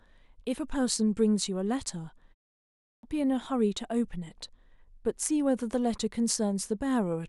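Clipped start after a pause, from 2.6 to 3.03 s: after a 0.34 s silence the output path had dropped into a low-power state and needed about 0.43 s to wake, so the speech that resumes there loses its opening and bursts in abruptly mid-sound.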